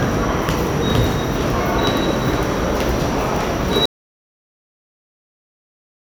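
The input was likely lost at 3.86 s, leaving only silence: an audio dropout to silence that cuts the sound off abruptly, with no room tone, through to the end.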